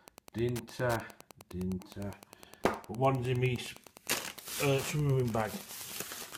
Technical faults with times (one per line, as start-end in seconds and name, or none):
0.00-6.38 Wi-Fi interference